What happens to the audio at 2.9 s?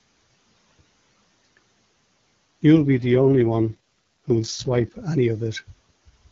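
An AMR rate drop runs from 2.76 s to 4.92 s, so 2.9 s falls just inside it. The link's error protection takes priority, and the AMR-WB coder falls back from its top rate to a far leaner one. The roughness heard fits a step down to around 6.6 kbit/s. The bandwidth stays put and nothing drops out, but the speech turns harsh, raspy and synthetic until the higher rate returns at 4.92 s.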